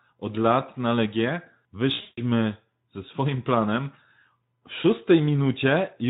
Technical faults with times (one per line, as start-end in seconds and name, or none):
1.93-2.20 VoIP packet loss concealed by the speech codec